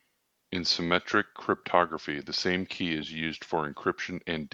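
Nothing in this short bit of speech stands out as a technical fault; it just runs along without any glitch catching the ear.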